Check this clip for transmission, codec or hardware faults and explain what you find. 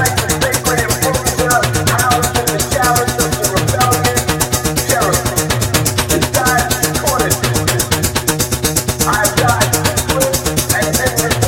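Nothing in the clip points to a transmission, codec or hardware fault. No disturbance of any kind can be heard at any point.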